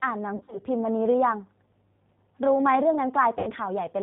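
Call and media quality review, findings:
G.729 codec, whole clip: speech band-limited, rough, faintly synthetic; spectrogram shows a hard ceiling near 4 kHz, smeared harmonics; damage plainly audible. 8 kbit/s G.729A rebuilds speech from a vocal tract filter, pitch predictor and sparse pulses per frame.

VoIP packet loss concealed by the speech codec, 0.36–0.61 s: 100 ms lost, scattered over 160 ms, longest gap 40 ms, consistent with about five 20 ms packets. Decoder extrapolates the last pitch and filter. Waveform shows decaying envelope.

Packet loss concealment, 3.39–3.52 s: 80 ms lost, suggesting four packets. Stretched concealment sound fading out; spectrogram shows dropping energy. Speech stays weak briefly after recovery while the decoder state rebuilds.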